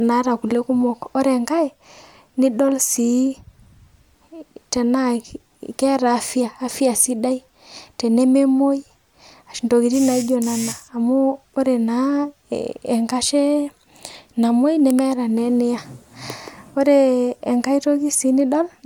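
Repeated lossy encoding is the likely cause: the speech seems to have gone through MP3 about three times, each pass requantising on a shifted frame grid. The result, throughout, is swirly, hollow smearing with blurred consonant attacks, which fits 128 kbit/s copies stacked together.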